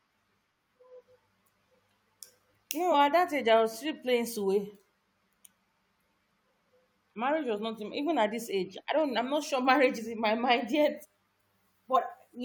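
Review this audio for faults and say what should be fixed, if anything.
Compressed frames skipped: the decoder lost or rejected whole frames, so the speech jumps ahead. This happens at 2.91–2.95 s (before "at that age I"), 11.02–11.06 s and 11.96 s, dropping roughly 40, 150 and 40 ms. To prevent it, verify file integrity after encoding and transfer, and re-encode or re-fetch any file whose frames fail their checks.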